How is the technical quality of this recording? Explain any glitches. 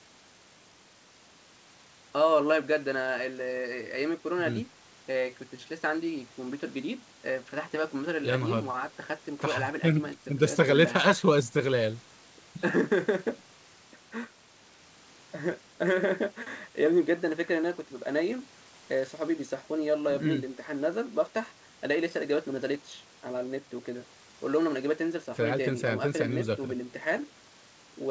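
No glitches here: it's speech carried over a call link with its microphone processing and codec, and the top end stops at 8 kHz, just what you'd expect from a wideband call.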